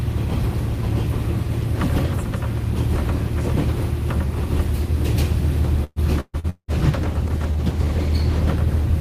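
From 5.84 to 6.71 s there is repeated packet loss, heard as a robotic sound. Four separate gaps, the longest about 183 ms, are each bridged by stretching the preceding sound, so just over half the stretch is concealed. Unlike a single dropout, the holes recur quickly, giving a choppy, robotic stutter with pieces missing.

At 6.67 s a call bitrate drop begins and lasts until 8.59 s. The encoder coarsens its coding, and the dull, watery texture fits a fall from about 32 to 16 kbps, held at the low rate for 1.76 s. Unlike the stutter before it, the sound stays continuous but loses detail and high frequencies.

Inside that degraded stretch, from 7.39 to 7.86 s, a jitter buffer slow-down repeats short pitch periods to rebuild its reserve. It adds about 53 ms and plays that span at 91% speed. The sound drags out at an unchanged pitch, which separates it from a tape-style slowdown.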